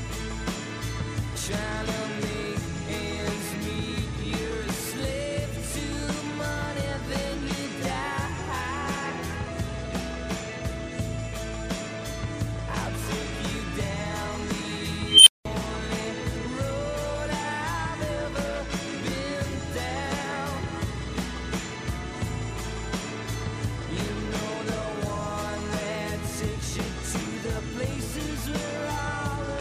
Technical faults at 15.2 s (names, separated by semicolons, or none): unstable filter